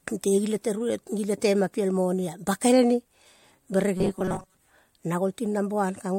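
Robotic sound from repeated short buffers runs from 3.97 to 4.57 s in this speech: a rigid 188 Hz metallic buzz, likely from a roughly 5 ms buffer replayed through most of the stretch.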